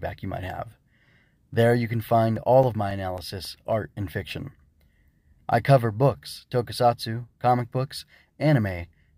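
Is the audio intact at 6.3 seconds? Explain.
Yes, at 6.3 seconds the speech runs intact, with no dropout, click, distortion or other fault at that moment.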